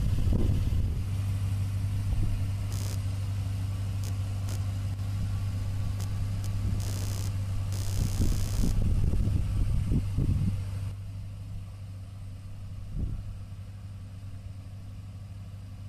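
From 2.71 s to 9.28 s, computer activity noise rides under the sound: a buzzy, chirping texture pulsing at around 70 times per second, roughly 20 dB below the signal. It comes from processor or graphics load shifting the shared ground of the audio circuit, so it follows the machine's activity, not the audio. On a spectrogram it appears as a comb of evenly spaced vertical striations starting and stopping abruptly, unrelated to the surrounding sound.

Two drops in level also occur, heard as one channel dropping out. The first is a brief 4.94 to 4.99 s dip in which the sound falls by 6 dB and instantly recovers. The second begins at 10.91 s and lasts to the end, again 6 dB down. The likely cause is one stereo channel going missing, so the mono sum loses half its common content. On the waveform the envelope steps down sharply at each onset; the spectrogram darkens evenly across all frequencies.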